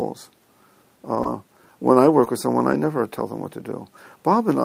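Brief rough, noisy patches, each about 20 ms long, appear at 1.15 to 1.17 s and 1.19 to 1.21 s. The sound stays continuous through them, but it turns grainier for a moment. This is a lost packet rebuilt from error correction. Each packet went missing, and the next one carried a low-bitrate copy of it. The decoder played that cruder copy instead, so there is no gap, only a dip in quality.

At 1.23 s a short smear or wobble follows. This is short concealed packet loss. A 20 ms stretch arrived too late, and the receiver extended the preceding sound for about 13 ms to cover the hole. From 1.25 to 1.27 s a rebuilt copy takes over, and that stretch sounds rough again.

Another rough, rebuilt patch sits at 2.09 to 2.11 s. At 2.25 s the same smear-then-rough pattern returns. About 13 ms of concealment extends the previous sound, then the error-correction copy covers 2.26 to 2.28 s.

Three more brief grainy patches, each about 20 ms and each from a packet rebuilt from the next packet's low-bitrate copy, occur at 2.58, 2.72 and 2.84 s.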